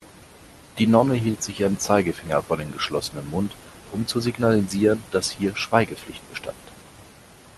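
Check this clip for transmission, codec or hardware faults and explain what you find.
No transmission, codec or hardware faults.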